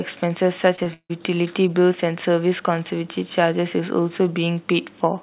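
At 0.76 to 0.80 s and again at 0.84 to 0.88 s, short concealed packet loss occurs: about 20 ms of audio failed to reach the decoder in time on each occasion. The receiver patched each gap by extending the preceding sound for roughly 16 and 19 ms before rejoining the real signal. Each patch is heard as a brief smear or wobble, two in quick succession, within the band-limited sound of a narrowband call path with nothing above 4 kHz.

From 0.94 to 1.11 s there is a long network dropout, the likely cause of a longer loss of about 160 ms of audio. Concealment carries the last sound forward for around 159 ms as a fading buzz or hiss, and about 80 ms of that stretch is silence. When the sound resumes, the lost portion never returns, so the audio jumps ahead.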